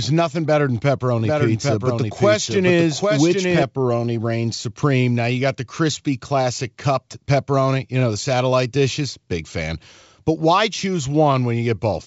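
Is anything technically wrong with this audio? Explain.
Yes, there's a doubled audio track in this speech, running from about 1.25 s to 3.63 s. A second full-band copy trails the original by roughly 0.7 s and sits around 5 dB lower. It's dry, with no decay or room colour, so it reads as a hard duplicate rather than an echo, and it cuts in and out abruptly at those edges. The likely cause is the sound being captured a second time through a slower path. The G.722 wideband coding stays clean underneath it.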